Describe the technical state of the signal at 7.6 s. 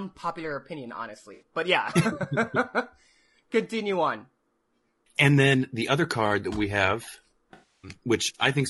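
At 7.6 s the signal sits inside an AAC frame loss with concealment, running from 7.53 to 7.91 s. About 300 ms of coded audio is missing. The decoder fills the gap from the last good spectrum. It scrambles the signs or interpolates the energy. The speech turns into a smeared, noisy, phasey wash.

Underneath, the same stretch carries the grain of low-delay AAC compression, likely AAC-ELD. Its short frames resolve pitch harmonics poorly. The rough texture fits a bitrate around 32 kbps. Noise fills the gaps between harmonics. The top band sounds dull and synthetic. This damage is plainly audible here, and the concealed patch inherits it.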